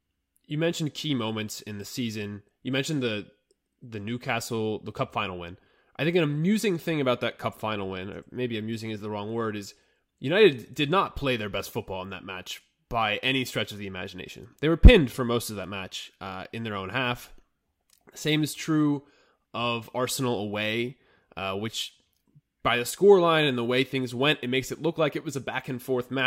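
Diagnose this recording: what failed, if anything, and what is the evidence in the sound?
Nothing failed: the recording shows no audible evidence of a fault at any stage.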